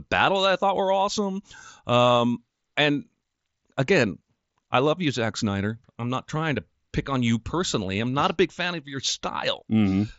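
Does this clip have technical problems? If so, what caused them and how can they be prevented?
No, there are no faults.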